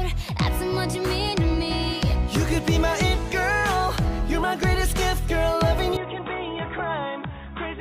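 At 5.97 s the sound abruptly turns dull and boxy, nothing above 3.8 kHz, quieter by about 10 dB with a new noise floor: likely an input switched to a poorer device.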